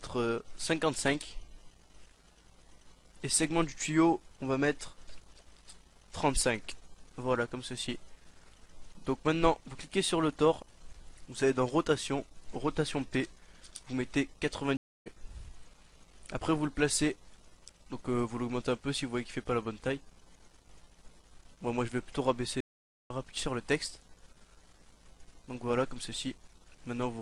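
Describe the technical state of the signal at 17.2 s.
At 17.2 s the signal is intact, with no audible fault at that moment.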